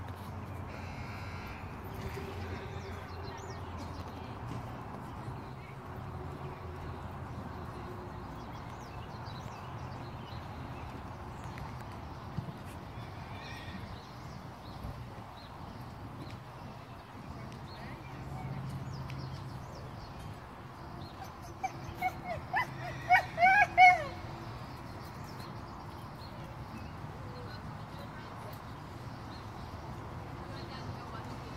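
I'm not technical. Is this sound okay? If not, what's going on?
Yes, this one's fine; nothing in it sounds broken or glitchy, so there's nothing to worry about.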